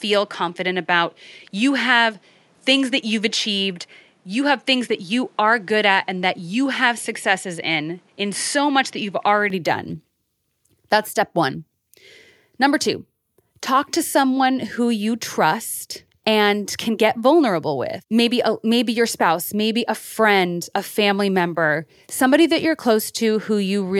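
A speech recording whose first 9.50 s sound duller and narrower in band, with a faint different hiss well below the voice. At 9.50 s it clears abruptly, likely an input switched to a poorer device; the changed noise floor, not just lost treble, separates it from plain filtering.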